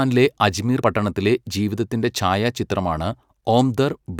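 At 0.81 s the likely cause is a broken MP3 bit reservoir: frames were lost, and the next frame reached back into earlier frames for its borrowed data and decoded another frame's bytes instead. In the speech this is heard as a sudden skip forward with a very brief disturbance just before "പട്ടണത്തിലെ ജീവിതത്തിൻ്റെ ഛായാചിത്രമാണ്". The disturbance is shorter than one frame, which fits MP3 frames of about 24 ms.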